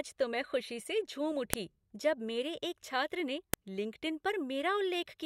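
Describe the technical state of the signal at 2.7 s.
At 2.7 s the speech signal is intact, with no audible fault at that moment.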